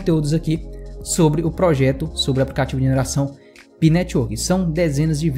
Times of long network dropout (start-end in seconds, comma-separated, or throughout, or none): none